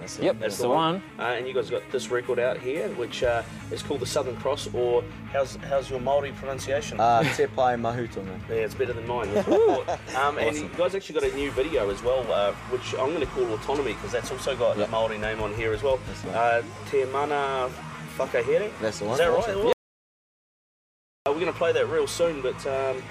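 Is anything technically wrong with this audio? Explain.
Yes. From 19.73 s to 21.26 s the sound stops dead and about 1.5 seconds pass in total silence, with no room tone or background underneath, before the audio resumes just as abruptly in mid-flow. This is an audio dropout to silence. The likely cause is that the input signal was briefly lost, through a disconnected device, a broken link or an accidental mute, while the recorder kept writing silence, so whatever occurred in that stretch is missing.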